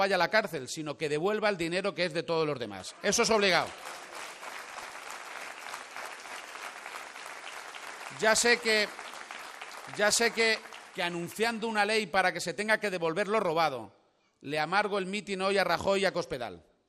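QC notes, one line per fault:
Throughout: MP2 compression. The sound is dull and carries a gurgling, granular distortion that is plainly audible from start to finish, most likely the result of MPEG Layer II coding at a low rate, around 80 kbps. Short of bits, the encoder drops its upper sub-bands entirely and quantises the rest coarsely, so the top end dies away while the remaining content churns. A spectrogram shows a hard ceiling with blocky bands flickering on and off beneath it.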